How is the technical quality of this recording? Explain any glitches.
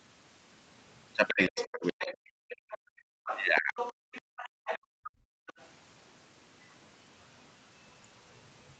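The recording has clear echo-control problems from about 1.3 to 5.7 s. The sound stops at 8 kHz, as a call path with Opus at 40 kbps would leave it.

Other side's voice leaking through: from 1.28 to 2.17 s, 2.49 to 2.78 s, 3.26 to 5.1 s and 5.47 to 5.67 s, a second voice sits under the speech. It is about 10 to 25 dB quieter. The likely cause is an echo canceller that left some loudspeaker sound in the microphone.

Speech suppressed in double talk: from 1.31 to 2.13 s and 3.6 to 3.77 s, the main speech dips hard. The first drop is very deep, and the second is shorter and lighter. Both sides likely talked at once, and the canceller turned everything down.

Background gated by the echo canceller: from 2.41 to 3.26 s and 4.05 to 5.47 s, the room sound drops by about 38 dB. The canceller clamped the microphone while the loudspeaker played. The room tone returned once it let go.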